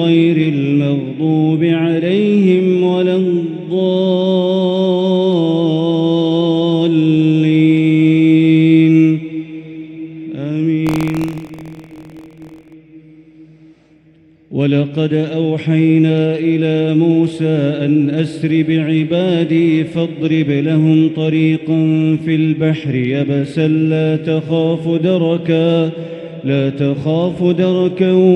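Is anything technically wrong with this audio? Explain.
Yes. From 10.84 to 12.73 s there is buffer tearing: writer and reader of the audio ring buffer overlap each period, splicing in a small slice of audio about 50 ms old with hard joins. This produces a steady 43.1 Hz robotic buzz, consistent with a 1024-sample buffer. Unlike an underrun, it leaves no silent gaps and occurs only while sound is present.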